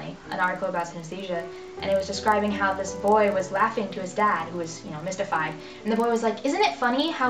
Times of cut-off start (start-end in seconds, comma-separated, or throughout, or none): none